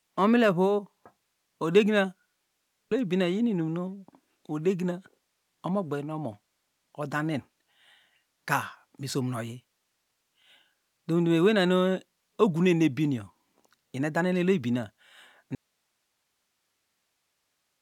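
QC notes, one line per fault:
15.55 s to end: audio dropout to a faint residue. The speech cuts off abruptly mid-flow and never returns, leaving only a low hiss roughly 50 dB below the signal. The path after the break likely stayed live while the wanted signal was lost upstream, so only the noise floor carries on. On a waveform the envelope collapses to a flat, near-silent band at 15.55 s. A spectrogram shows the harmonic structure ending on a hard vertical edge, followed by faint, even broadband noise.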